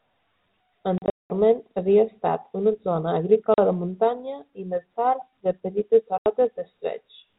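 Hard-edged dropouts chop the speech from 0.98 to 1.3 s, just before "havia estat una zona", then at 3.54 to 3.58 s before "de muntanya i més", and at 6.18 to 6.26 s after "de petites". This is packet loss filled with silence: about 260 ms, 40 ms and 80 ms went missing, in gaps that fit 20 ms packets, over the band-limited G.711 telephone sound.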